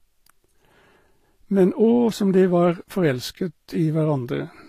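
A speech recording with transcoding between lossy codecs throughout. Nothing is present above 15 kHz, and two different kinds of coding damage sit on top of each other. The grainy, synthetic-sounding highs fit a low-rate HE-AAC stage near 24 kbit/s, and a later Vorbis pass near 47 kbit/s, likely re-encoding that result, adds its own smearing. A single low-bitrate encode would leave one consistent artefact character, not two mixed together.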